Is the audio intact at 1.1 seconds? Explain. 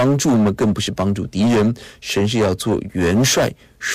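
No, at 1.1 seconds the speech is hit by hard clipping, and that's true for the whole clip, not just that moment. The level is pushed about 13 dB past what the signal path can pass, so the peaks get sliced flat, with something like a seventh of the samples sitting on the ceiling. Those squared-off tops throw harmonics high up the spectrum, which you hear as a harsh, buzzy fuzz on every louder syllable.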